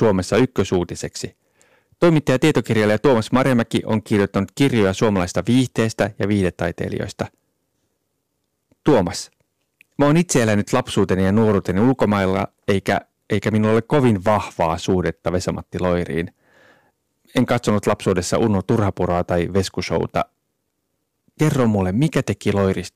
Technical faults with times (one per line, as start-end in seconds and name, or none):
0.00-22.96 hard clipping